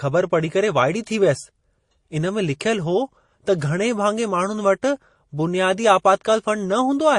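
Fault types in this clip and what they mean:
MP3 compression: The speech carries plainly audible codec damage from start to end. The sound points to a low bitrate of around 40 kbps, likely MP3. At that rate the encoder runs short of bits. It drops weak frequency lines. Those lines switch on and off between frames. The result is a watery, swirling texture, and sharp sounds lose their edges.
Pre-echo: Just before a sharp attack near 3.58 s, a hiss rises out of the quiet. It lasts about 29 ms, to about 3.61 s, and sits about 15 dB above the surrounding noise floor. The smear fits a transform block of roughly 52 ms. The coder never switched to short blocks. So noise sized for the loud attack spread back into the silence ahead of it, and the attack sounds softened.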